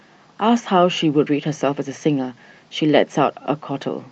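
Nothing here goes wrong at any point: the speech comes across just as you'd expect from an Opus call path, with the top end stopping at around 8 kHz and the usual codec texture, and no dropouts, glitches or other faults turn up along the way.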